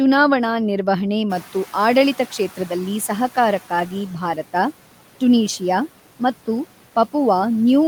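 Noise suppressor catching up, 1.29 to 4.0 s: room noise jumps by about 22 dB around one and a half seconds in, and the suppressor's estimate trails it. The noise first comes through with less reduction, then sinks by about 9 dB over 2.7 s.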